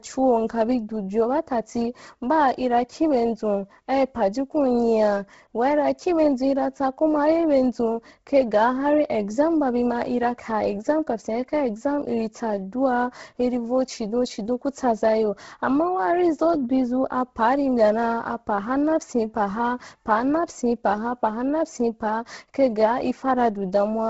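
Throughout, the speech has a breathy, grainy edge and nothing above 7.7 kHz. Heavy Bluetooth LC3 compression, likely at a low bitrate, noise-filled the upper spectrum.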